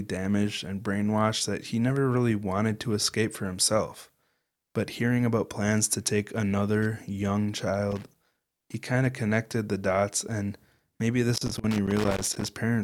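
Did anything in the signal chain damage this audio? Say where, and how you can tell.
Yes, in the analogue wiring: loose connector crackle from 7.91 to 8.74 s, after "to take another young", and from 11.34 to 12.48 s, after "the dots and maybe". A failing contact chops the signal, showing as ragged dropouts and sharp spikes on the waveform and broadband vertical streaks on a spectrogram.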